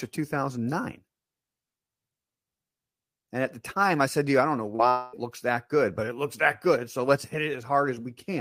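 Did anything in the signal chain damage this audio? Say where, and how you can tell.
Yes. Short concealed packet loss at 4.75 to 4.81 s, right after "you I don't know", points to the network stage. About 40 ms of the stream arrived too late to decode, and the receiver's concealment spent some 35 ms of that extending the preceding sound, pitched continuation or shaped noise, before crossfading back into real audio. You hear it as a brief smear or wobble, a short blip with no real content in it.

Long network dropout from 4.89 to 5.15 s, again after "you I don't know" and ending just before "looks that good but", is likely a network outage. Roughly a quarter second, 240 ms, never arrived, and the decoder covered almost exactly that span, 241 ms, by stretching the last sound into a decaying buzz or hiss, with no stretch of true silence. When real audio resumes, whatever was said in that gap is simply missing.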